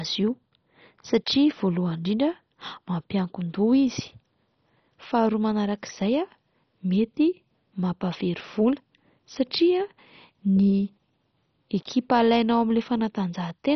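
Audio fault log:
throughout, MP2 compression: The speech is dull, with nothing above 6.1 kHz, and carries a heavy gurgling, granular roughness. This is likely MPEG Layer II coding starved of bits, which fits a rate near 32 kbps. The coder divides the spectrum into 32 equal sub-bands and shares out a small bit budget. Upper bands get none and go silent, while bands that flicker in and out and are coarsely quantised produce the watery grain.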